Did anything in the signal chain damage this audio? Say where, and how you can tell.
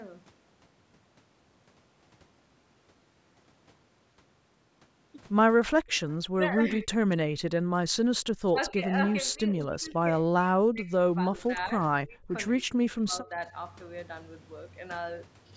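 Yes, the call processing stage is where it happened. From 6.29 to 6.86 s, and again from 8.52 to 13.39 s, the sound drops out in pieces, by up to about 30 dB and about 25 dB. Around 70 ms and two seconds are affected in total. This is likely speech suppressed in double talk, where the echo canceller ducked this talker while the far side spoke. A spectrogram shows vertical gaps slicing the harmonics, and the waveform shows sharp notches in the envelope.

At 9.6 to 9.66 s a faint, brief copy of the sound returns 236 ms late, about 35 dB below the direct signal. The likely cause is echo leak: a loudspeaker-side canceller let some microphone pickup through. On a spectrogram it appears as a weak, delayed ghost of the harmonic pattern, and on the waveform it is a tiny blip.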